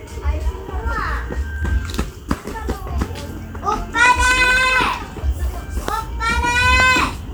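From 1.18 to 4.95 s, periodic USB or driver dropouts cut through the sound. Something blocks the audio path every 63.9 ms. Each time, a tiny sliver of audio, roughly a tenth of a millisecond, is skipped. Roughly seventy regular ticks result, heard only under signal.

A loud pop follows at 5.88 to 5.91 s, about 15 dB above the sound. Two more land between 6.80 and 6.98 s, about 20 dB up. The likely cause is a sudden voltage step, such as a plug or switch. The sound continues underneath.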